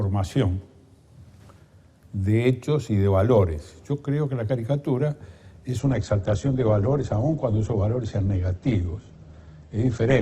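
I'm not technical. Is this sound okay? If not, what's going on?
No. From 5.79 seconds to the end, the sound abruptly turns duller and rougher, with nothing left above about 8.2 kHz, the range that gives crispness and sparkle. There's no pause or dropout, just a sudden drop in quality. This is an adaptive stream at a lower bitrate: the connection slowed, so the player switched to a smaller, more heavily compressed version of the audio to keep playing without interruption, trading clarity for reliability.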